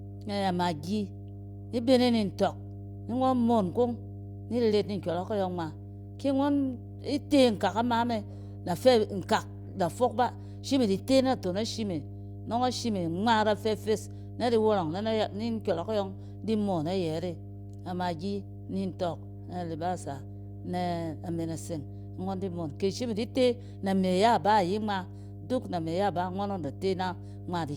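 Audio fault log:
Throughout: mains hum, a steady 50 Hz drone sitting under the speech the whole way, and it's fairly prominent, roughly 15 dB down from the talking, so you hear it clearly in the gaps and still feel it under the words. That's the power line getting into the signal, most plausibly through a ground loop or a transformer close to the cabling, which leaves a constant low tone with a few low harmonics stacked on it.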